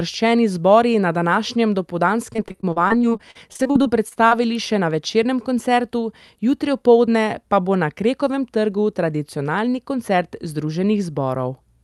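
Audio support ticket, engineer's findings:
Repeated packet loss (robotic sound), 2.33–4.33 s. Choppy speech, twenty short gaps up to 40 ms. Jitter buffer patching lost packets by extending prior audio, about 22% of span.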